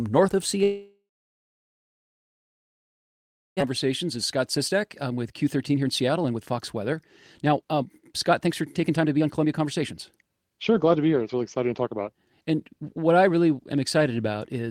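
From 0.63 to 3.71 s the speech gives way to a brief fading buzz, then near-silence, likely a long network dropout. About 1.6 s of audio never returns. A spectrogram shows a smeared tail dissolving into an empty band; the waveform goes almost flat.

From 4.18 to 13.27 s a jitter buffer speed-up plays the speech at about 114% speed with unchanged pitch, sounding hurried as roughly a second and a half of tiny pitch-period pieces is cut out. Harmonics stay level on a spectrogram while syllables look compressed in time.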